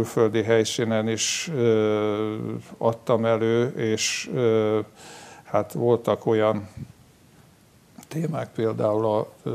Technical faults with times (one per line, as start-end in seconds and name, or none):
none